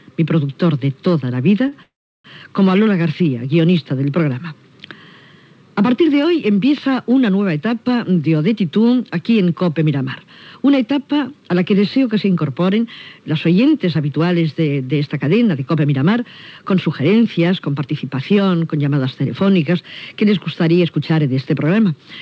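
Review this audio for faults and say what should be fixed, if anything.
A short stall from a late packet at 1.68 to 1.77 s holds the sound about 36 ms too long while the jitter buffer waits. Unlike a freeze, it never goes silent. A slightly deeper jitter buffer target would absorb delays this small.

A call audio freeze follows at 1.83 to 2.26 s. The sound trails off and then falls silent for about 340 ms, inserting a gap of about 415 ms. It then resumes where it stopped, with nothing lost, which marks it apart from packet loss. Held-up packets likely emptied the jitter buffer. Smoother network routing or adaptive buffering that grows sooner would prevent it.

A jitter buffer speed-up runs from 13.58 to 17.87 s, playing at 107% speed with the pitch unchanged as roughly 0.3 s is trimmed away. Unlike resampling, the pitch does not shift. Gentler, slower catch-up after delay bursts would keep the pace natural.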